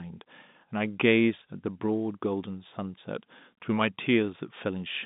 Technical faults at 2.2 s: none

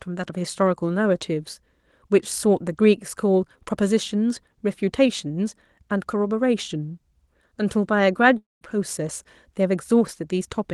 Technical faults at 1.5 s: none

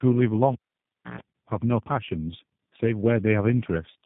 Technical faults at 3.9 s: tandem speech coding

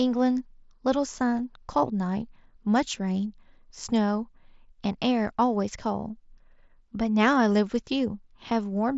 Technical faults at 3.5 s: none

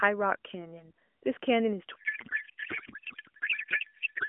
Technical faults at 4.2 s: codec payload misread

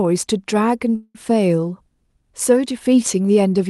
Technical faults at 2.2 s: none

